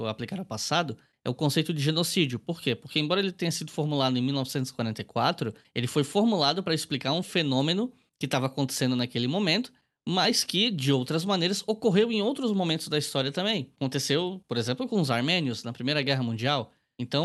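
No technical faults can be heard in this speech.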